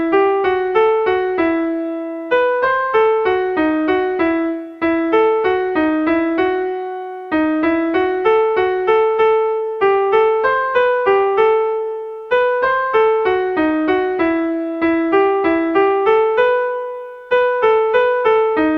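No technical faults can be heard anywhere in the audio, and the signal stays steady and continuous throughout.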